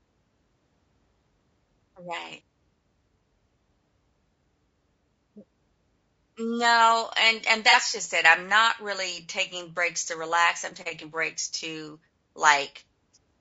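From the start, the speech sounds rough and grainy, with noise between harmonics and a dull top band. This is likely low-delay AAC compression at a low bitrate, around 32 kbps.

At 7.70 to 7.75 s, between "and and" and "just it I'm not", comes AAC frame loss with concealment. The decoder patched the missing audio from earlier spectrum, giving a brief smeared, noisy blip.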